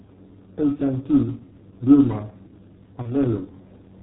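From the start, the speech carries heavy G.723.1 codec damage. Its 30 ms frames and slow voice model, consistent with the 6.3 kbit/s mode, leave it muffled and hoarse with smeared consonants. A spectrogram shows nothing above 4 kHz and coarse, blocky harmonic detail.

At 3.02 s comes VoIP packet loss concealed by the speech codec. The decoder guessed forward from its last pitch and filter, which fits a single 30 ms frame going missing. The gap turns into a buzzy tone or coloured noise that fades, then stays weak or distorted until 3.15 s. The waveform shows a shrinking, repetitive stretch, and the spectrogram shows frozen, smeared harmonics.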